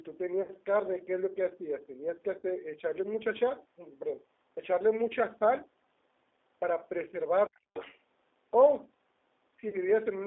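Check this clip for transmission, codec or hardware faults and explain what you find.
There are four kinds of problem here: codec damage running the whole way through, three short dropouts patched over by the decoder, and a stretch around 7.5 to 8 s where the call's echo control seems to be fighting with the far end.

The G.729 codec damage is plainly audible from start to finish. The line is squeezed into roughly 300 Hz to 3.7 kHz, which is narrower than the call microphone processing would allow. The speech also has that slightly rough, synthetic edge you get when the voice is rebuilt from a vocal tract filter, a pitch predictor and a handful of pulses per 10 ms frame. That combination points to G.729A at around 8 kbit/s.

VoIP packet loss concealed by the speech codec shows up three times: 0.42 to 0.50 s (about 60 ms missing), 2.39 to 2.43 s (40 ms), and 9.69 to 9.78 s (40 ms). The durations suggest two or three consecutive 20 ms packets each time. 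In each gap the decoder keeps extending its last pitch and filter settings while turning the gain down. The result is a brief buzzy, smeared stretch that fades, and the voice takes a moment to firm up again after the packets resume.

Speech suppressed in double talk hits from 7.47 to 7.67 s. The talker's level collapses by something like 40 dB for about 200 ms, so it almost vanishes. The likely cause is that the far end was talking at the same moment, and the echo canceller couldn't tell the local voice from loudspeaker echo. It clamped down on everything, and the near talker got cut along with the echo.

The other side's voice leaking through follows right after, from 7.73 to 7.98 s. A second voice comes in about 10 dB below the main speech. This is likely far-end audio from the talker's loudspeaker that the echo canceller didn't fully remove before it reached the microphone. It's the flip side of the suppression just before: the canceller is struggling through that whole exchange.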